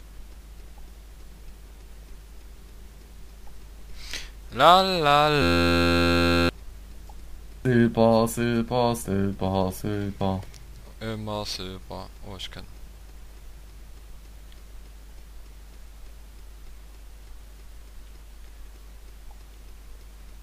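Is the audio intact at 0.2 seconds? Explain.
Yes, at 0.2 seconds the audio is intact, with no dropout, click, distortion or other fault to be heard at that moment.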